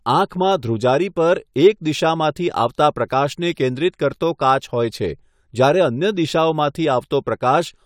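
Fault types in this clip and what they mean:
No fault types are present in this clip.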